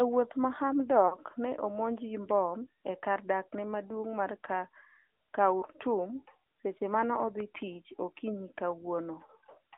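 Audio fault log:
Throughout, AMR narrowband mobile codec: the whole clip has that phone-call squeeze, held to roughly 250 Hz to 3.6 kHz, with nothing up top. At around 10.2 kbps the vocal-tract model gets thin on pulses, so there's a plainly audible buzzy, synthetic edge to everything.
1.08 to 1.17 s, lost AMR speech frames: about 40 ms goes missing just before "ne omonj gi bom", which fits two dropped frames. The decoder papers over the gap by reusing its last pitch and vocal-tract settings at falling gain, so you get a brief smeared dip rather than a hard hole.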